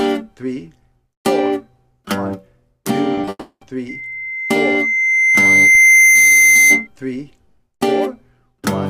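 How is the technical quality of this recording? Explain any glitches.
The recording is compromised by a cluster of network glitches around 3.2 to 3.6 s, a sustained feedback squeal and a single low-frequency thump.

From 3.15 to 3.19 s, 3.21 to 3.25 s and 3.25 to 3.29 s there are three short concealed packet losses, each about 20 ms. The receiver bridged each gap by extending the preceding sound, so the audio briefly smears and wobbles rather than cutting out.

From 3.29 to 3.63 s the audio is replaced by a synthetic continuation that fades out over roughly 320 ms, ending in about 100 ms of silence before the real signal resumes with material missing. This is likely a long network dropout, where nothing arrived and the concealment ran out.

From 3.89 to 6.87 s a loudspeaker feedback squeal appears at 2.1 kHz. It swells over roughly two seconds to about 10 dB above the programme level. The microphone is picking up its own loudspeaker, and loop gain above unity at that frequency lets the tone build on itself.

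At 5.75 s a DC step shifts the waveform's zero line and is heard as a low thump. The offset then drains away as a 20 Hz high-pass removes it, and the audio carries on unchanged.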